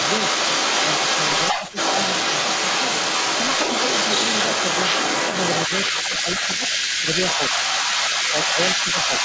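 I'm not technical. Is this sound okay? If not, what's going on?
No. Two problems run through this recording of speech.

The first is an echo leak, heard from start to finish. A second copy of the talking trails the original by about a fifth of a second (180 ms) and is fairly loud. The likely cause is someone on the call using a loudspeaker whose echo canceller didn't fully remove the sound its microphone picked up, so that copy was sent back. A steady, fixed delay like this sets it apart from room reverberation, which smears sound rather than repeating it.

The second is speech suppressed in double talk. At 1.53 to 1.63, 5.92 to 6.26, 6.57 to 6.61, 7.0 to 7.07, 7.71 to 7.78, 8.32 to 8.58 and 8.84 to 9.1 seconds, the voice briefly dips in loudness. The dip around 6 seconds is the deepest. Each dip lasts well under half a second. Most likely the echo canceller heard both sides at once, couldn't tell the talker from the echo, and turned everything down. 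Unlike a dropout, the sound softens rather than vanishing.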